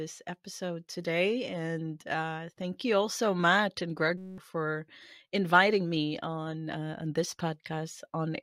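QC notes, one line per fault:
4.18–4.38 s, system hang loop. The speech stops and a steady buzz takes its place, just before "for inviting me on". A 5.33 ms slice of audio repeats exactly, 38 times over. That happens when the computer or driver stalls while the sound hardware keeps replaying the same ring buffer. The loop length fits a 256-sample buffer. The repeats run at 188 Hz, so they merge into a pitched tone rather than a stutter. About a fifth of a second of speech is lost.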